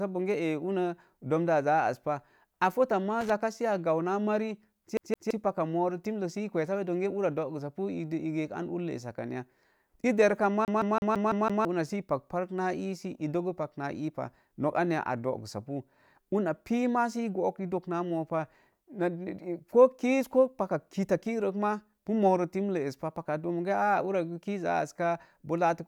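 A worn or dirty contact making and breaking as it shifts causes loose connector crackle from 3.21 to 3.30 s, right after "pa a fota maa" and before "sə a gau". For those 90 milliseconds the speech is chopped on and off at random, so the audio turns into a short, irregular burst of scratchy crackle.

The playback then gets stuck on one turn of the CD, as if a scratch kicks the laser back a track at the same point on each rotation. From 4.97 to 5.31 s, just before "paka moro timlek", a 167-millisecond fragment plays twice, with a tiny mute at each jump. From 10.65 to 11.65 s the same fault repeats a 167-millisecond slice six times, producing the fast, evenly spaced stutter of a skipping disc.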